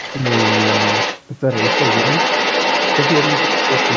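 A second voice runs under the speech from 0.0 to 1.23 s and again from 1.49 s to the end, roughly as loud as the talker. It is likely other side's voice leaking through after incomplete echo cancellation. On a spectrogram, two overlapping harmonic patterns appear, with the band cut off at 8 kHz.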